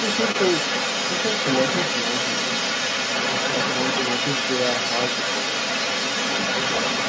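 From 0.0 s to the end at 7.1 s, a second voice runs underneath the speech. This is the other side's voice leaking through. It sits at roughly the same level as the main talker, so the two compete throughout. The likely cause is the talker's loudspeaker feeding the microphone while the echo canceller fails to remove it. Both voices stop short at 8 kHz, from the call microphone processing.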